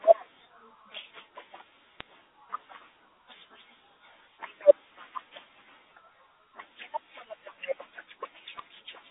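At 2.00 s and again at 8.58 s, bit errors on a digital phone line flip bits in the G.711 A-law stream, so single samples jump and the speech gets brief sharp ticks. Each shows as thin vertical lines up to 4 kHz on the spectrogram and a few isolated spikes in the waveform.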